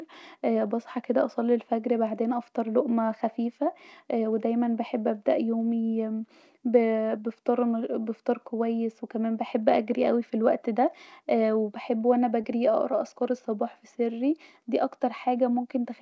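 At 12.42 to 12.45 s there is a short concealed packet loss. About 20 ms of the speech never reached the decoder in time, and the receiver covered the gap by extending the preceding sound for roughly 15 ms before crossfading back into the real signal. It is heard as a brief smear or wobble, and any short consonant in that span may be missing. The band stops at 8 kHz, which fits a G.722 call codec at 64 kbps.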